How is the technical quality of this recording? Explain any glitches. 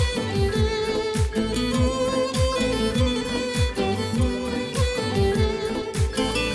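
No glitches or technical faults are audible anywhere in the recording.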